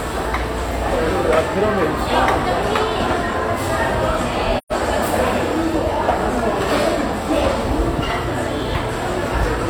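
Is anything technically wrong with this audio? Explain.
Yes. There is an AAC frame loss with muting from 4.57 s to 4.72 s. Part of the AAC stream never reached the decoder, which fits about three lost frames, or roughly 128 ms of audio. The decoder filled the gap with a zeroed spectrum. Its overlapping transform windows then fade the sound down into the gap and back up after it. What you hear is a brief, soft-edged dropout where the audio sinks into silence and returns.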